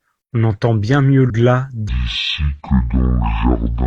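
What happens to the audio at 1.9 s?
At 1.89 s the speech drops into a section at the wrong speed that runs to the end of the clip. It plays at about 0.55 times normal speed, likely from being fitted to the wrong clock, so it turns slow and deep, roughly ten semitones lower.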